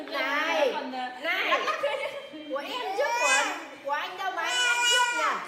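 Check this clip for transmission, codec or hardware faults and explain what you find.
Nothing here points to a transmission, codec or hardware problem; the audio comes through steady and intact with no dropouts, glitches or distortion to flag.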